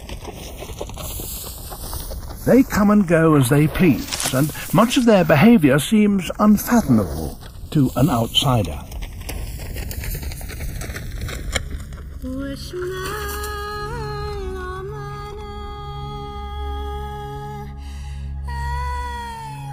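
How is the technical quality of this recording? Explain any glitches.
The recording has a persistent flaw: the channels drifting apart. From start to finish, a slow flanging sweeps through the sound. The channels appear to come from two devices on separate clocks, mismatched by roughly 70 parts per million, so the delay between them creeps upward to about a millisecond by the end. As that offset grows, the comb-filter notches it creates glide steadily through the spectrum, producing the moving, hollow swirl.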